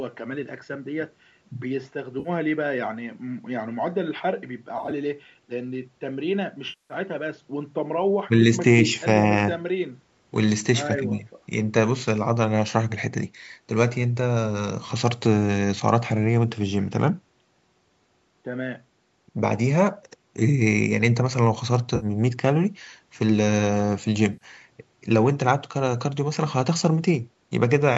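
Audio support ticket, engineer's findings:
AAC frame loss with concealment, five dropouts. 2.20–2.29 s, about 50 ms, and 21.96–22.06 s, about 60 ms: brief smeared, noisy patches. 4.78–4.92 s: about 70 ms of loss scattered over 140 ms, longest run around 20 ms, which fits 10 ms frames. 6.69–6.94 s, about 210 ms, and 24.33–24.45 s, about 80 ms: the longest decays to a faint noise floor and fades back in. Decoder repeating the last spectrum with scrambled phase, fading as the loss lengthens. Spectrogram: horizontally smeared, blurred harmonics, with the longer gaps dimming. Waveform: flattened, noise-like envelope. Sound band-limited at 8 kHz by the call microphone path. Codec likely AAC-ELD.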